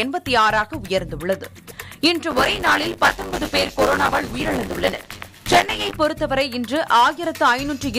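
Buffer tearing runs from 2.3 to 5.96 s. The writing side and the hardware read position have slipped into each other, so roughly a third of every 10 ms period replays audio from about 20 ms earlier. The hard joins produce a steady, robotic 100 Hz rattle over the sound.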